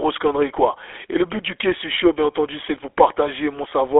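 From start to finish, the speech has passed through the GSM full-rate codec. It rebuilds the vocal tract from a simple filter model and excites it with a sparse, regularly spaced pulse train, a scheme that fits the 13 kbps rate. The result is a plainly audible buzzy, gravelly roughness. The sound is confined to a telephone band of roughly 300 Hz to 3.5 kHz, with nothing above 3.8 kHz.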